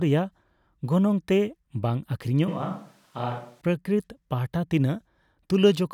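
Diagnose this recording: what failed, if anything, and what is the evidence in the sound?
A switch to a distant microphone runs from 2.48 s to 3.61 s. The speech turns abruptly roomy, hollow and bass-light, drops roughly 5 dB, and room noise rises to about 35 dB below it. At the capture stage, the close microphone's feed likely dropped, leaving a farther pickup.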